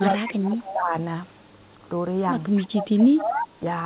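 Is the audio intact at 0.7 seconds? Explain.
No. 0.7 s sits inside a stretch of speech suppressed in double talk running from 0.0 to 0.94 s. The talker's level sags, at its worst by around 20 dB, and that's likely the echo canceller ducking everything while both ends talk at once.

Right on top of that, from 0.67 to 0.73 s, there's a short echo leak: a brief, faint copy of the voice about 15 dB down, arriving 250 ms late, likely where the far end's canceller didn't fully scrub its loudspeaker pickup.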